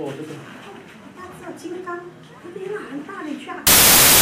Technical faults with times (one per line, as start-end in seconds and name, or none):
3.67-4.21 samples built from the wrong bytes